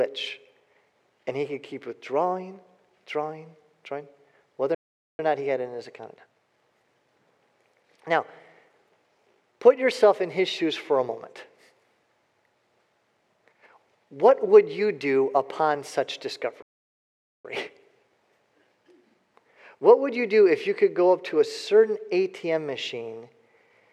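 At 4.75 s and again at 16.62 s the audio cuts to silence for about 0.44 s and 0.82 s, then resumes: playback stalls, likely from the player's buffer running dry.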